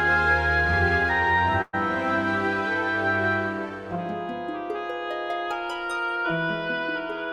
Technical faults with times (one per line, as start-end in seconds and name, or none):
1.61-1.75 burst of packet loss